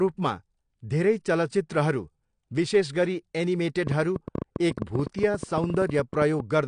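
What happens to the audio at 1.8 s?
At 1.8 s the speech carries the same damage heard through the whole clip, which is likely AAC compression. Nothing reaches above about 9.8 kHz, and the codec damage is plainly audible. The cut-off and damage point to AAC-LC at a low bitrate, around 32 kbps. At that rate the encoder quantises its frequency lines coarsely against a hearing model, lowering the bandwidth and leaving spectral gaps or noise substitutes. The result is a dull, smeared sound with a warbling or fizzy edge.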